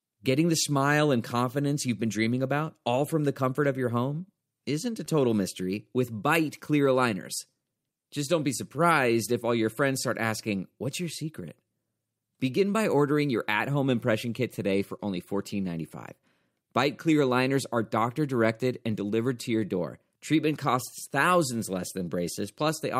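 Clock drift between sender and receiver runs through the whole speech clip: the sender's clock is about 2% slower, so the receiver's buffer keeps draining.

Repeated timing corrections follow from 0.31 to 22.63 s. The receiver repeats short pieces to stay in step, playing at 98% speed and adding around 0.4 s overall.

A short stall from a late packet occurs at 14.97 to 15.00 s. The buffer ran empty, so 16 ms of the last sound is held too long before playback resumes, with nothing lost.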